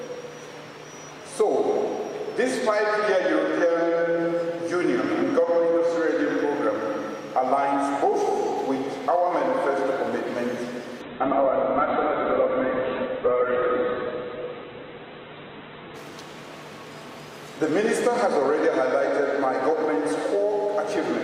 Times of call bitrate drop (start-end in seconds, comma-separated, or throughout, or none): 11.02-16.03